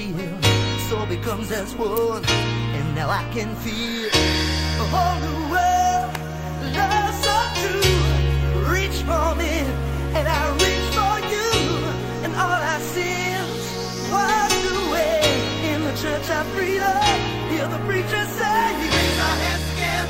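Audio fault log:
1.97 s and 6.15 s: electrical switching spike. Two sharp snaps cut across the sound, the first louder. Likely a nearby switch arcing into the line.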